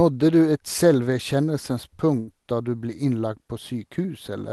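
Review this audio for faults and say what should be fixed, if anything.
A burst of packet loss hits the speech from 2.19 to 2.29 s. Concealment holds the preceding sound for about 80 ms, fading it out as the gap continues. Playback then picks up about 80 ms further on, so that stretch of speech is simply missing. Enabling Opus in-band forward error correction and allowing the jitter buffer more depth would cover losses of this length.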